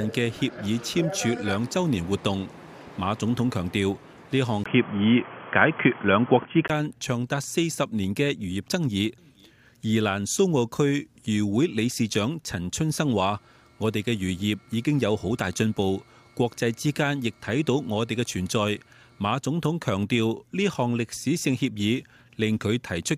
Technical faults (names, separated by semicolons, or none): input switched to a poorer device